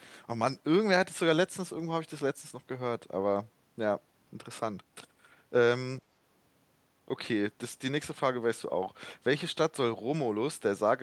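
No technical faults are audible.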